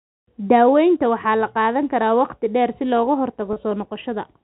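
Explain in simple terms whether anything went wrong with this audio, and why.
At about 3.53 to 3.56 s the sound briefly catches and buzzes, as if held for a moment. This is packet loss with pitch repetition: about 30 ms of audio went missing, and the receiver filled the gap by repeating the last tiny cycle of sound. The telephone-style G.711 telephone coding caused no noticeable harm.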